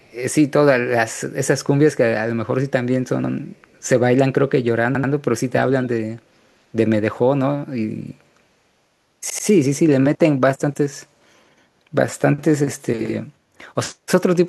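A speech recording with two kinds of fault. Faint echo leak appears twice, from 0.0 to 0.14 s and from 3.55 to 3.8 s. A delayed copy of the voice trails about 219 ms behind. It sits low, about 35 dB and about 40 dB under the speech. The likely cause is a far-end loudspeaker whose echo canceller left some of its microphone pickup behind, sending it back down the line. Repeated buffer stutters occur four times. Each repeated piece lasts about 85 ms, which fits a 4096-sample buffer. At 3.24 s and 13.06 s the piece plays twice. At 4.95 s and 9.30 s it plays three times, stretching to about 5.12 s and 9.47 s. Hard joins mark each repeat. The device replayed its last buffer while waiting for new audio, and no speech is skipped afterwards.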